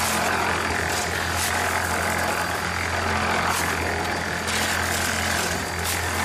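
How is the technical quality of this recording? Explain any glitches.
No glitches can be heard anywhere in the recording. The audio runs continuously, with nothing that interrupts or disturbs it.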